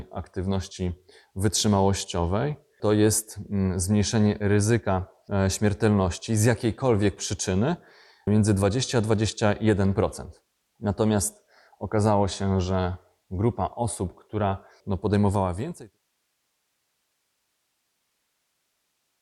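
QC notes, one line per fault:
Throughout: MP2 compression. The speech is dull and gurgling, upper bands flickering in and out with granular grit, likely from Layer II sub-band coding starved of bits, which fits roughly 80 kbps.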